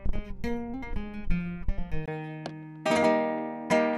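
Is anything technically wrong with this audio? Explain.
Yes. From 2.06 s to the end, the sound goes dull. Nothing passes above 11.4 kHz. A 20 ms gap marks the change. The level holds steady, and a faint new noise floor appears. The likely cause is an input switched to a poorer device with a narrower band.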